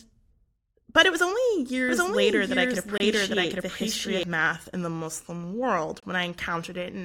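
A doubled audio track runs from 1.89 to 4.23 s: a second full-band copy of the speech, at about the same level and roughly 0.7 s behind, with no decay or room colour. It most likely comes from a slower capture path or a misaligned edit, and it starts and stops abruptly.

A gap between chunks occurs at 2.98 to 3.00 s and again at 6.00 to 6.03 s. Each is a 25 ms hard-edged hole recurring every 3 s, which fits chunked delivery where each block starts late or carries padding, interrupting the sound without losing any.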